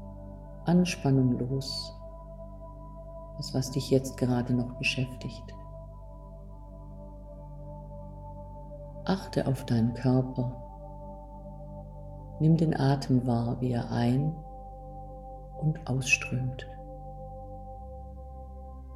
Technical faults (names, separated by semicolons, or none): video or display buzz